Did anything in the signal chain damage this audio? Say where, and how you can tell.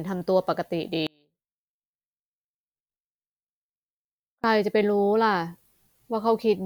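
Yes. The speech suffers an audio dropout to a faint residue from 1.07 s to 4.44 s, about 3.37 s in all. The signal vanishes abruptly mid-flow and returns just as suddenly, while only a faint trace of it, some 35 dB down, remains in the gap. The likely cause is an intermittent analogue connection that broke the main path while leaving the line live. A pause or fade would decay gradually, and a digital mute would leave true silence.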